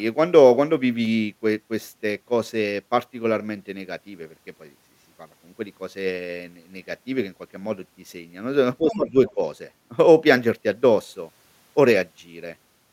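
From 8.8 to 9.15 s the speech sinks by up to roughly 10 dB, dipping unevenly over about a third of a second. That is speech suppressed in double talk: both ends were likely talking at once, and the echo canceller, unable to tell the near talker from the loudspeaker echo, turned everything down. Inside that dip, at 8.92 to 8.96 s, a brief scrap of another voice surfaces about 15 dB below the speech. This is the other side's voice leaking through, most likely loudspeaker sound that the canceller failed to strip from the microphone. A fainter scrap follows at 9.27 to 9.31 s, around 25 dB down, which is likely the same leak. Right after it, from 9.35 to 9.39 s, the speech dips briefly by about 5 dB, a short second instance of double-talk suppression that likely comes from the canceller clamping again while both signals overlap.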